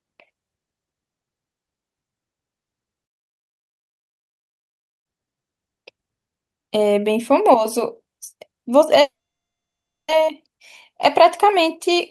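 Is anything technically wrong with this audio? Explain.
Yes, the speech has two interruptions, carried over a call codec whose band tops out around 12 kHz.

From 3.05 s to 5.07 s there is a playback stall: the speech cuts off mid-flow and the output goes fully silent for about 2 s before picking up again. The likely cause is the player running out of data or its thread being blocked. What sets this apart from a call freeze is that the break is a clean drop to silence from the first instant.

From 9.01 s to 10.10 s there is a call audio freeze. At the break the last sound carries on briefly as a fading buzz, then gives way to near-silence for roughly 0.98 s before the speech resumes where it left off. Nothing is lost, only delayed by about 1.07 s. This likely comes from packets held up in transit emptying the jitter buffer. The fading tail at the start distinguishes it from the stall's abrupt cut.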